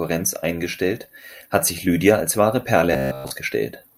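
From 2.93 to 3.31 s the speech collapses into robotic sound from repeated short buffers: a rigid metallic buzz near 66.7 Hz, likely from one 15 ms buffer looping entirely in place of fresh audio. A spectrogram shows evenly spaced harmonic lines; the waveform shows identical repeating cycles.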